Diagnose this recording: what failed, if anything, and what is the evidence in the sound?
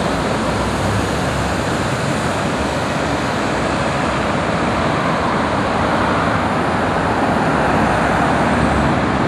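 Nothing failed: no stage in the chain, from wiring and conversion through buffering, transport and storage, leaves any audible mark on these sounds.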